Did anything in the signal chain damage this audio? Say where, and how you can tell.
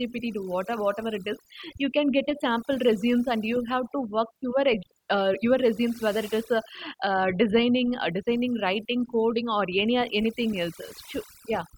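Yes. Overdone noise removal affects the whole speech clip. The gaps fall to near silence with twinkling specks. The suppressor was set too strong. It cut bands near its noise estimate, taking quiet speech detail with them.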